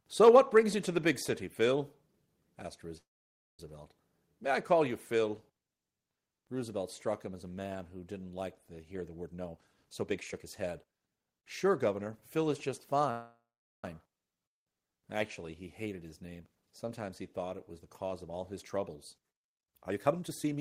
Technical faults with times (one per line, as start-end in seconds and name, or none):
0.27-0.58 microphone overload
0.29 microphone volume stepped down
2.97-3.60 call audio freeze
9.22-11.88 jitter buffer speed-up
13.11-13.84 call audio freeze
15.92-16.85 jitter buffer speed-up
19.47-20.61 jitter buffer speed-up